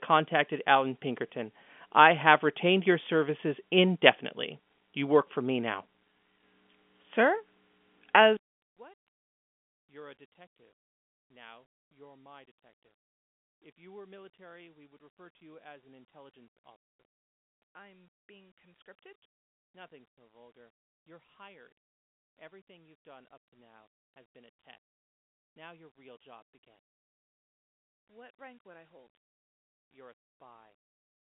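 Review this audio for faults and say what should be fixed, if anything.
One channel inverted from 8.37 s to the end of the clip: the speech falls by about 30 dB, likely because one stereo channel's polarity was reversed, so the nearly identical channels cancel when summed to mono and leave only a faint residue. To prevent it, check per-channel polarity in the signal chain and monitor the mono sum before delivery.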